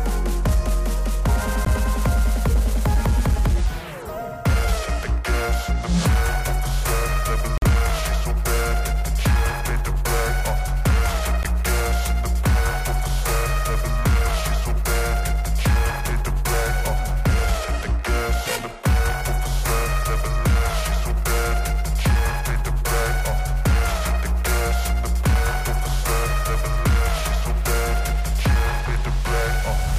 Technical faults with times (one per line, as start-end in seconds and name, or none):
1.65-1.67 Bluetooth dropout
7.58-7.63 Bluetooth dropout
11.43-11.46 Bluetooth dropout